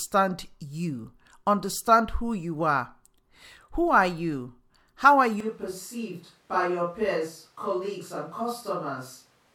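From 5.40 s to the end, the speech abruptly turns roomy, hollow and thin, roughly 5 dB quieter, likely a switch to a distant microphone.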